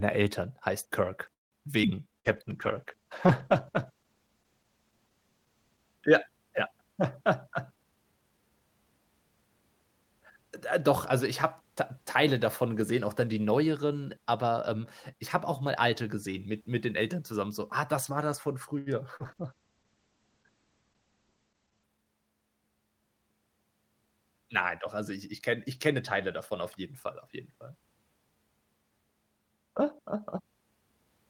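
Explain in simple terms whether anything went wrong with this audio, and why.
Several network problems affect this speech recording.

At 1.33 to 1.55 s there is a call audio freeze: the sound stalls into near-silence for about 0.17 s, likely because packets were held up, then resumes with nothing lost.

At 1.82 to 1.86 s a skip ahead drops roughly 70 ms, and playback jumps forward almost seamlessly.

From 2.12 to 3.05 s a jitter buffer slow-down stretches the audio to 96% speed by repeating tiny pieces, so sounds drag slightly.

At 2.19 to 2.28 s a burst of packet loss removes 60 ms, which is replaced by a fading continuation of the previous sound.

Two call bitrate drops, at 2.24 to 6.07 s and at 19.23 to 21.94 s, make the audio rough and coarse. The second is also muffled, with nothing above 8 kHz.

Jitter buffer speed-ups at 7.48 to 8.61 s and at 21.61 to 22.06 s trim short pieces, so the sound plays at 116% speed and feels hurried.

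Right after "das war das von", at 18.78 to 18.89 s, a short stall from a late packet holds one sound too long, but nothing is missing.

At 19.16 to 19.23 s, short concealed packet loss drops 60 ms and patches the gap with a brief smear.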